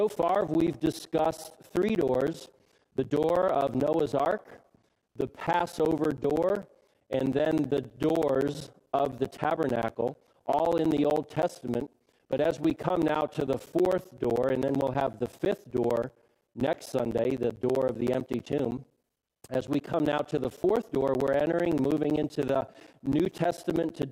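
Periodic USB or driver dropouts run from 0.09 s to 24.03 s. Roughly every 64 ms, about 10 ms of audio is lost to silence, heard as steady ticking during signal. The waveform shows evenly spaced flat gaps, and the spectrogram shows regular thin broadband vertical stripes.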